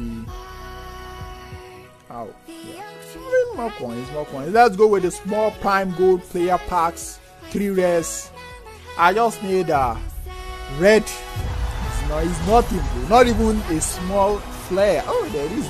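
No technical faults can be heard.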